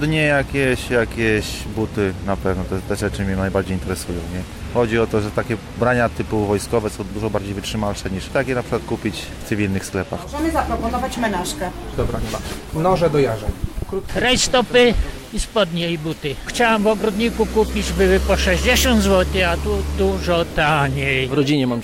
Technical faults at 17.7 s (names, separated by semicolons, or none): corrupt frame decoded